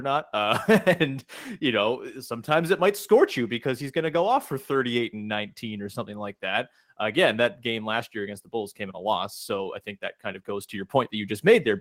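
A speech recording with no technical faults to report. Nothing in the audio points to a problem in how it was captured, processed or delivered.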